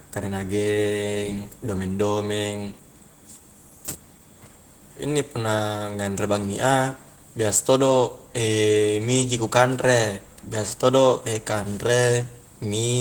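Plainly audible coding damage runs through the whole speech clip, the mark of Opus voice compression at a rate that fits about 16 kbps. In hybrid mode, a linear-prediction coder handles the lower band and a transform layer the band above 8 kHz, up to about 20.1 kHz, in 20 ms frames.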